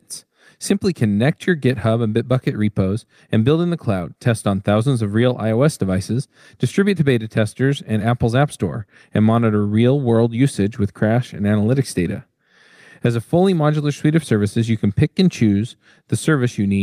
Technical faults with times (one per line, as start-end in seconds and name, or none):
none